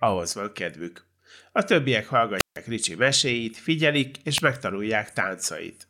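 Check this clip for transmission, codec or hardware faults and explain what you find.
Two wireless microphone squelch dropouts occur in this speech clip, at 2.38–2.57 s (about 150 ms muted) and 4.34–4.42 s after "meséit figyelik" (8 ms muted). A fading radio signal trips the receiver's squelch, producing a hiss swell, then silence. That hiss swell sets it apart from a clean digital packet gap.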